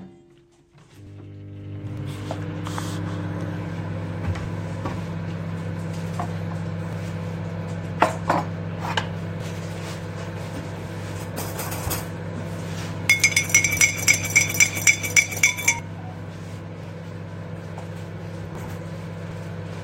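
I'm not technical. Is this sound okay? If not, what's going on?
No, there are two kinds of small gaps where pieces of the sound are missing.

Dropped buffer (overrun): the software likely failed to collect its audio in time, so the hardware overwrote it. About a twentieth of a second vanishes at 1.07, 15.79 and 18.55 s, heard as a sudden jump forward.

Audio missing between chunks: the recorder works in 2.5-second pieces and likely loses a sliver, roughly a fiftieth of a second, each time it switches. You hear brief skips at 1.97, 6.93, 9.40, 14.36, 16.83 and 19.31 s.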